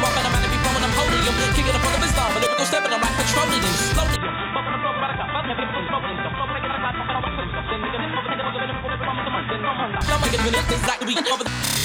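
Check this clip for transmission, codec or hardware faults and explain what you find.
One fault is present. From 4.16 to 10.01 s the sound turns dull and boxy with nothing above 3.8 kHz, drops about 5 dB and gains new background noise roughly 30 dB down. The likely cause is an input switched to a poorer, narrower-band device.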